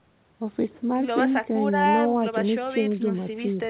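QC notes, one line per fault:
No faults heard.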